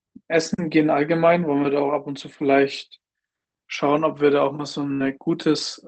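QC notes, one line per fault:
4.93 to 5.01 s, burst of packet loss: A short run of the speech stream never arrived in time. The receiver bridged the hole by stretching the last received sound for about 65 ms and fading it out, so it comes across as a brief held buzz or dull smear. Playback then jumps ahead, and roughly 60 ms of speech is simply gone. The call path's Opus coding, band-limited to about 8 kHz, sits underneath the dropout.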